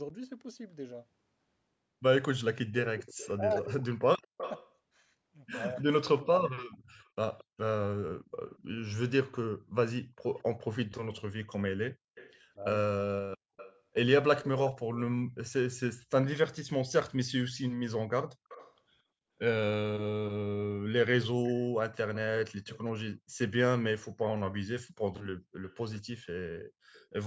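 An echo canceller on one side likely failed to remove its loudspeaker pickup, so an echo leak sends a copy of the speech back about 223 ms late. It is strongest at 2.98 to 4.75 s, at about 10 dB below the speech. During that overlap, the canceller likely confused the local talker with the echo and turned both down: speech suppressed in double talk drops by up to about 40 dB, in pieces totalling under a second, between 3.37 and 5.86 s. The echo returns fainter at 6.99 to 8.58 s, 10.35 to 10.43 s and 12.15 to 16.39 s, with a brief dip of about 10 dB at 12.55 to 12.60 s. It comes back again at 18.49 to 18.75 s and from 22.14 to 27.06 s, sitting roughly 20 to 25 dB down.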